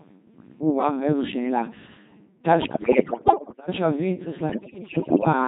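Throughout, the speech passes through a Codec 2 vocoder, its thin, buzzy tone fitting a rate near 2.4 kbit/s. Only pitch, voicing, level and envelope survive, resynthesised from sine waves, so it sounds robotic. From 2.62 to 3.68 s, and again from 4.50 to 5.33 s, bit errors on digital voice radio corrupt frames, roughly one bit in ten, then more. Pitch, level and timbre jump into warbles and bleeping gibberish.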